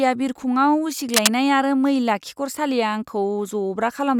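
A worn cable, connector or control was likely disturbed between 1.14 and 1.31 s, so the contact resistance in the signal path fluctuated rapidly for a moment. That jittering connection injects a dense, irregular spray of noise bursts into the speech, reaching roughly the same loudness as the speech itself. For that brief stretch, a harsh scratching, rustling texture sits over the speech, the cable scratch noise typical of a faulty contact.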